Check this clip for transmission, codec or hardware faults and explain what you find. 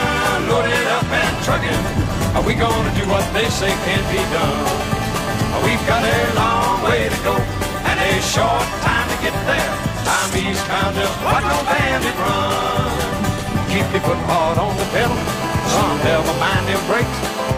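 Two problems show up: a phone buzz that appears twice and one short skip in the audio.

GSM phone buzz runs from 3.61 to 6.42 s and again from 14.83 to 17.53 s. A nearby 2G handset on a call is pulsing at 217 Hz, and the audio circuitry rectifies those radio bursts into a steady, harsh, harmonic-rich rasp about 11 dB below the programme.

Compressed frames skipped at 13.42–13.48 s. The decoder dropped a run of frames, which fits roughly four frames of 46.4 ms each. About a fifth of a second of audio just vanishes at the join.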